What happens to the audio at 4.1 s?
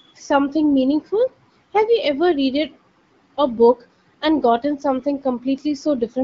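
Nothing goes wrong at 4.1 s: the speech carries on intact through that moment, passing through the AMR wideband (HD Voice) codec at 12.65 kbit/s, where it stays clear.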